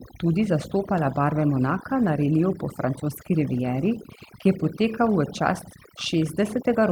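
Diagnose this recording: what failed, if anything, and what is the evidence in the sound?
Overdone noise removal in the call processing, all the way through: the background drops and breaks up into twinkling specks, and weaker speech bands get gated off with the noise.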